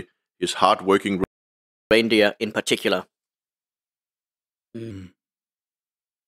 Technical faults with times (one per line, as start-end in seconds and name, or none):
1.24-1.91 playback stall
1.91-4.91 catch-up at higher speed